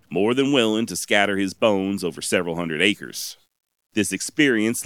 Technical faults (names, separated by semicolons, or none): low bit depth without dither